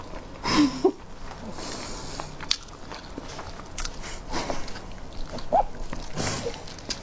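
No technical faults are audible.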